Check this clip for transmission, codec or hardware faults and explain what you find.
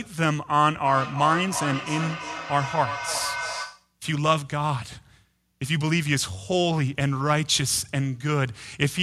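One fault is present: feedback echo between two devices, from 0.82 to 3.94 s. The speech returns roughly every 0.3 s, ringing and thinning, peaking about 7 dB below the direct sound, as a second device's playback re-enters the microphone uncancelled.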